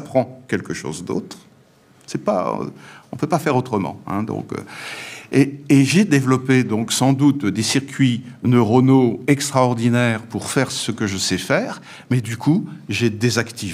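No technical faults are audible.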